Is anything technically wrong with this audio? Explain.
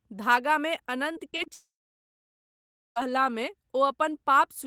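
Yes. Two network faults disturb the speech in quick succession.

From 1.13 to 1.48 s there is repeated packet loss, giving a robotic sound. Four short gaps hit this stretch, the longest 19 ms. Each hole is patched by stretching the last bit of sound, so about 19% of the span is concealed, and 80 ms of the real signal never arrives. The speech turns choppy, with small pieces missing.

From 1.54 to 2.98 s the audio cuts out for about 1.4 s. This is likely a long network dropout. The last sound is briefly carried on as a fading buzz. Then roughly 1.3 s of near-silence follows. The speech resumes at 2.98 s with the missing stretch simply gone, not delayed.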